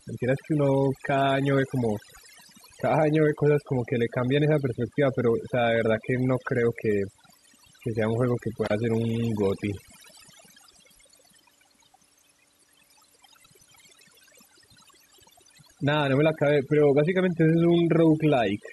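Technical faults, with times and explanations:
Throughout, overdone noise removal: an over-strong noise reducer cuts frequency bands near its noise estimate, taking quiet speech detail too, leaving twinkling specks.
8.64 to 8.72 s, intermittent contact: a loose cable or plug opens for 43.5 ms, so the speech cuts out with crackle at each edge and faint hiss between.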